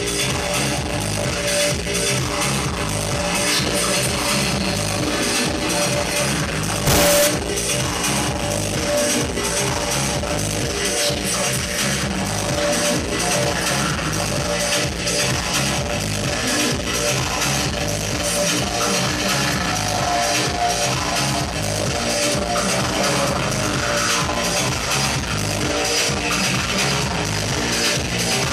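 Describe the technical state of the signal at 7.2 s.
At 7.2 s the audio is inside a float read as integer fault, from 6.87 to 7.27 s. It likely comes from 32-bit float samples decoded as 32-bit integers. The waveform turns nearly square, loud and harsh, with background noise as loud as the main sound.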